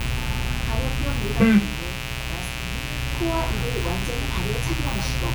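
Mains buzz runs through the whole clip, from the first moment to the last, underneath the everyday sounds. Sharp switching spikes from something like a dimmer, a rectifier or an unshielded line got into the signal twice per cycle of a 60 Hz supply, stacking harmonics of 60 Hz far up into the kilohertz range. The result is a steady, raspy buzz sitting only about 10 dB below the wanted sound, so it is plainly audible throughout.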